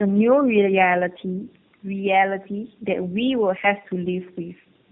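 Tandem speech coding runs throughout this speech clip: three lossy speech coders in a row, likely a G.729A stage followed by two AMR-NB passes, each re-coding the previous one's output. This stacks roughness, muffling and warble, with nothing above 3.6 kHz.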